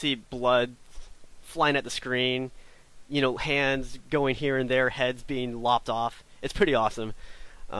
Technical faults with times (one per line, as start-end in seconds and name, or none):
none